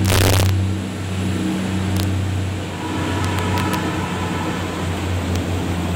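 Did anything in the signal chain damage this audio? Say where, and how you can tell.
Yes. Integer overflow in a fixed-point gain or sample-format stage. Violent cracks land on loud peaks from 0.05 to 0.49 s, 1.97 to 2.03 s and 3.25 to 3.75 s, with a single crack at 5.36 s. The signal ran only about 0 to 2 dB past full scale. Peaks that should have been limited wrapped to the opposite sign, jumping across the whole range. That is why the cracks sound far harsher than clipping.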